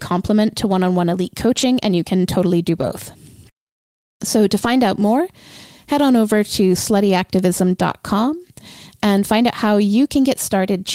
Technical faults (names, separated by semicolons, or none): lost packet rebuilt from error correction